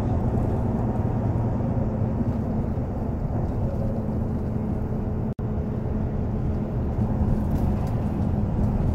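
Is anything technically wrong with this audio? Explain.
Yes. At 5.33 to 5.39 s there's a 61 ms gap at a join of encoded pieces: leftover encoder delay and padding leave a smeared dropout before the sound resumes.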